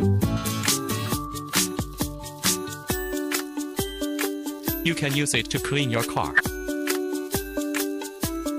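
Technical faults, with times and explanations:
0.37 to 8.58 s, pre-emphasis left on: from 0.37 s to the end, the treble sits about 11 dB above the 1 kHz level at 10 kHz, because a transmission boost was never undone by its matching de-emphasis. The result is thin, bright and hissy, with sharp sibilance. The rise fits a J.17 curve.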